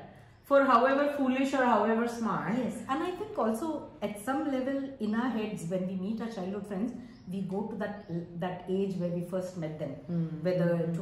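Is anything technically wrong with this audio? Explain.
Yes. From 9.37 s to the end at 11.02 s there is timecode bleed: 25-frame linear timecode leaks in from a neighbouring line, adding a faint, steady chirping warble between tones near 1 and 2 kHz.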